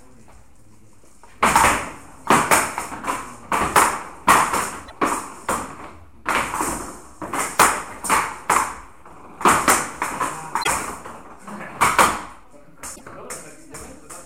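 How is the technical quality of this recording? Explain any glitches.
Three short glitches from damaged data in a compressed stream break up the recording, at 4.82–4.92 s, 10.59–10.68 s and 12.92–13.02 s. Corrupted bytes throw the decoder out of sync until it finds the next frame header, so each one is a brief glitch in the sound.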